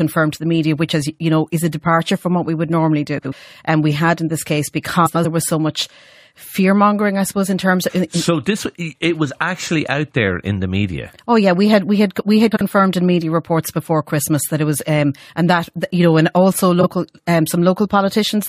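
Frames out of order: neighbouring runs of coded frames reached the decoder swapped and were played in that order, so each stretch has its halves exchanged. It happens at 3.18–3.33 s after "what we would normally", at 5.06–5.25 s after "had in this case", at 12.51–12.62 s, and at 16.81–16.87 s after "you know and also". Each swapped block is about 70, 93, 46 and 23 ms long. Each event sounds like a brief garbled flutter, and no time is lost.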